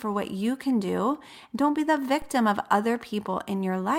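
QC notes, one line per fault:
2.22 s, DC step. The waveform's zero line jumps suddenly, by about -31 dBFS, and the speech carries on over it unchanged. That abrupt shift in the baseline is heard as a single low thump or click. The offset does not hold. It drains away as a 5 Hz high-pass in the chain pulls the signal back to centre, so the thump is brief rather than a lasting displacement.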